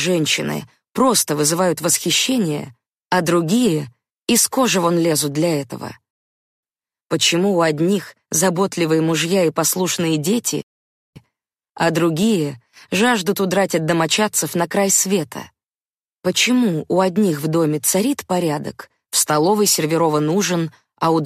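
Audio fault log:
6.11–6.63 s and 10.62–11.16 s: rebuffering stall, where playback runs dry and goes silent for about 0.52 s and 0.54 s, then picks up exactly where it stopped. Unlike a dropout, nothing is skipped. The pause only adds time.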